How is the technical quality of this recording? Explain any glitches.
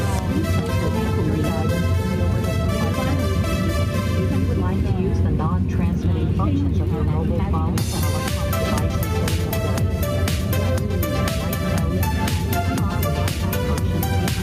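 The recording has one fault, present from start to finish. Gain pumping, throughout: the gain swings by around 5 dB, pulled down on each loud sound, squashing loud and soft parts together. The likely cause is input gain set far too high, with a fast limiter or compressor clamping down on every peak.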